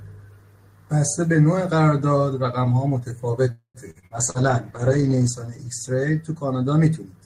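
At 3.51 s the sound stops moving and the last fragment is drawn out as a fading buzz that ends in about 100 ms of silence, before the speech resumes at 3.78 s. This is a call audio freeze, likely from packets held up in transit so the jitter buffer ran dry. The receiver filled about 232 ms, and nothing was lost, only delayed.

From 3.91 s to 4.38 s the speech turns choppy, broken by four short holes, the longest about 45 ms. This repeated packet loss (robotic sound) means roughly a third of that stretch is patched continuation, with about 160 ms of real audio missing.

Starting at 4.15 s and lasting until 6.69 s, the speech becomes rough, watery and dull, its top end gone. This fits a call bitrate drop from about 32 kbps to 13 kbps, with the encoder coding coarsely and trimming high frequencies. It stays at its worst for about 1.2 s.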